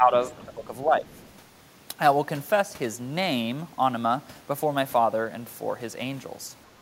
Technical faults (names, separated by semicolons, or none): speech suppressed in double talk; other side's voice leaking through